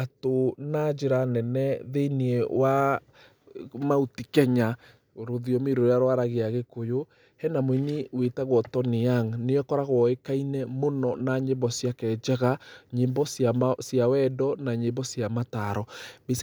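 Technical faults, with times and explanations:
No technical faults can be heard in this speech.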